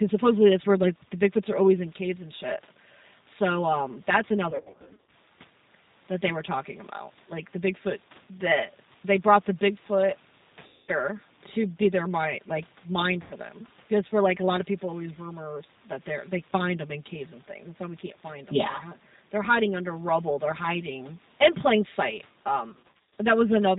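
Channel delay (comb filtering) runs throughout. One channel lags the other by roughly 5 ms, and summing them to mono carves notches from around 100 Hz upward, leaving the sound hollow and phasey.

G.729 codec damage is also constant and plainly audible. Nothing above 4 kHz survives, and the speech comes out rough and synthetic, as an 8 kbit/s rebuild of filter and pulses.

VoIP packet loss concealed by the speech codec strikes four times:
1. At 4.50–5.13 s, after "um that's", about 370 ms is lost in scattered bursts of up to 70 ms.
2. At 10.67–10.91 s, about 210 ms is lost.
3. At 13.22–13.34 s, after "their mind like mind", 90 ms is lost.
4. At 22.69–23.18 s, after "hiding in plain sight", 280 ms is lost in bursts of up to 50 ms.

Each time the decoder stretches its last pitch and filter into a fading buzzy tone or coloured noise, and the voice stays weak for a moment after packets return.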